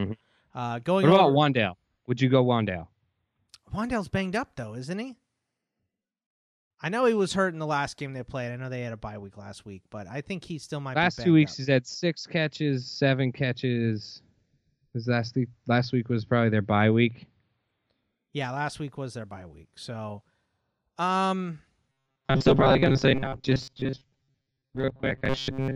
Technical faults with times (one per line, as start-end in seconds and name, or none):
21.90-25.76 robotic sound from repeated short buffers